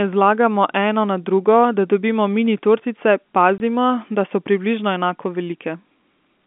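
From the start to about 2.46 s there's mains hum, a steady low 50 Hz drone, most likely from a ground loop or nearby transformer bleeding the power line into the signal. It sits about 15 dB under the speech, then drops away.

At 3.58 to 3.60 s there's packet loss filled with silence: a 20 ms hole with hard edges, which fits one lost packet the receiver papered over with nothing. It's a quick chop, heard through the narrow telephone-band sound of the line.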